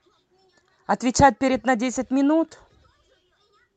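Nothing stood out on listening to this speech clip, which carries the ordinary sound of a call path with its top end limited at about 8 kHz.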